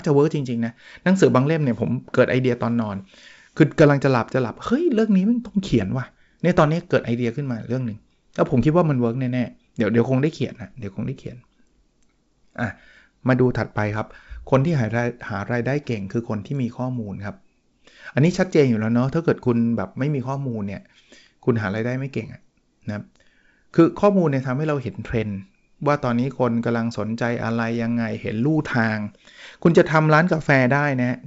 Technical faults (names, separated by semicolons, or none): none